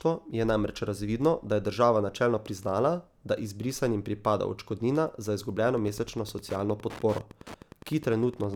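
From 5.65 s, right after "izbrisanim pripada odškodnina za", Wi-Fi interference sets in and lasts to the end. The audio circuit rectifies a nearby radio's beacon, producing a steady tick every 102.4 ms, roughly 20 dB below the speech. On a spectrogram it shows as evenly spaced, thin vertical broadband lines.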